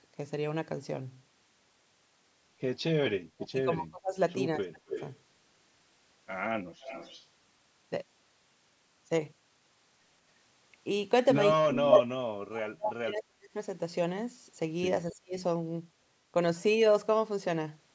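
When both sides talk at once, the echo canceller in this speech call likely cannot tell its own talker from the loudspeaker echo, and it turns everything down. The result is speech suppressed in double talk: the voice sinks by around 30 to 40 dB or drops out in pieces at 3.01 to 4.16 s, 4.57 to 4.92 s, 11.63 to 11.91 s, 12.17 to 13.49 s and 15.12 to 15.37 s. The longest gaps, near 3 s and 12 s, amount to roughly one and one and a half seconds of missing voice.

Elsewhere the canceller likely fails the other way, letting microphone pickup of the far loudspeaker slip through. This echo leak returns a copy delayed by 267 ms, at 4.9 to 5.12 s and at 6.81 to 7.26 s, where it sits about 10 to 15 dB under the speech. At 11.91 to 12.03 s the scrap comes back about 10 dB louder than the speech itself.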